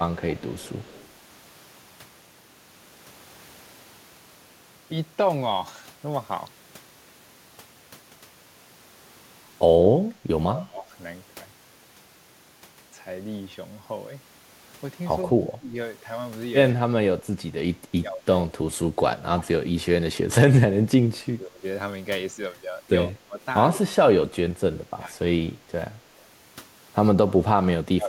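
From 0.2 to 1.09 s there is an echo leak. A faint copy of the speech trails the original by 138 ms, roughly 30 dB down. The likely cause is a far-end echo canceller letting some loudspeaker pickup return. It sounds like a shadow.

Speech suppressed in double talk follows, at 10.48 to 10.89 s, 15.24 to 15.75 s, 16.73 to 20.18 s, 21.24 to 21.64 s, 23.08 to 23.4 s, 23.75 to 26.07 s and 27.42 s to the end. The speech dips sharply, sometimes by around 30 dB. It thins and drops out in pieces. The longest stretches run about two seconds. The echo canceller likely mistook overlapping talk for echo and turned it down.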